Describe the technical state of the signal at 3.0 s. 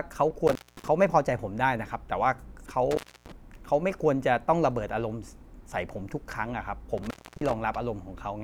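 At 3.0 s the speech is inside an intermittent contact fault running from 2.91 to 3.32 s. A loose cable or plug connection breaks for a moment, so the signal path opens. The sound drops out for about 287 ms. Crackle marks the edges where the contact breaks and remakes. While the line is open, faint hiss remains.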